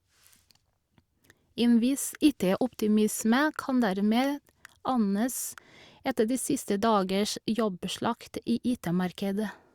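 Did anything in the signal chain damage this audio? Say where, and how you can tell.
No, nothing in the signal chain audibly damaged this speech, and no stage leaves any audible mark on it.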